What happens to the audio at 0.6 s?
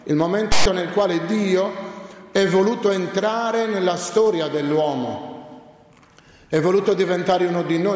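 File tags played as audio, from 0.52 to 0.66 s: text metadata decoded as samples gives a loud one-sided rasp, a hard-edged DC-offset block with broadband spectrogram smear.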